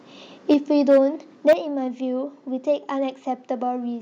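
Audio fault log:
0.50–0.54 s, microphone overload: peaks driven about 2 dB past the converter's limit, roughly a tenth of samples flattened, giving a brief crackle only on the loudest moment, likely from excessive input volume.
0.54 s, microphone volume stepped down: voice and background drop together by about 4 dB in one instant step, not a gradual fade, likely the call software reacting to that overload.
0.89–0.99 s, microphone overload: harsher, longer crackle with peaks about 4 dB over and around a sixth of samples clipped; the distortion follows loudness rather than sitting throughout.
1.48–1.53 s, microphone overload: the worst instance, about 6 dB over with nearly a third of samples clipped, so the peak sounds torn and gritty.
1.53 s, microphone volume stepped down: an abrupt drop of about 7 dB straight after the distorted peak, lowering voice and room alike, unlike a compressor's recovering dip.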